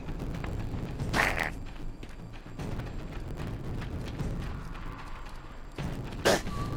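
Throughout, a block size mismatch (truncated) discards each block's tail, adding a 109 Hz buzz and running the audio 1.09 times fast.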